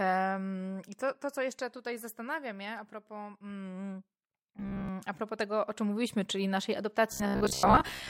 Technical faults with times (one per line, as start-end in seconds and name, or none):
4.57-4.89 robotic sound from repeated short buffers
7.12-8.09 robotic sound from repeated short buffers